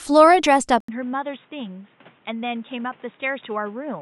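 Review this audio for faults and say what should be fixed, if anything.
At 0.80 s the speech drops out for 80 ms, then returns dull and boxy until the end. Nothing remains above 3.8 kHz. The level falls by about 10 dB, and a new noise floor sits roughly 30 dB down. The likely cause is the input switched to a poorer device. Lock the recording input so the system cannot change devices mid-session.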